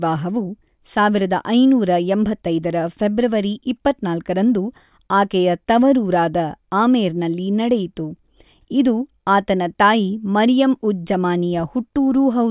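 No technical faults occur at any point in the speech.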